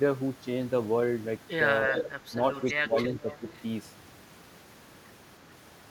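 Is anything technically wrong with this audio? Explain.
Yes. Two faults overlap between about 1.9 and 3.6 s.

Speech suppressed in double talk, 1.88–2.34 s and 2.81–3.46 s: the echo canceller likely mistook simultaneous talk from both ends for loudspeaker echo and attenuated it. The voice dips by about 5 dB in the first stretch and by about 15 dB in the second.

Echo leak, 1.99–2.03 s, 2.55–2.74 s and 3.30–3.61 s: the loudspeaker side's echo canceller likely failed to remove everything its microphone picked up from the loudspeaker, so part of it returned. Faint copies of the voice, lagging by roughly 380–390 ms and about 15–20 dB below it, appear in short scraps.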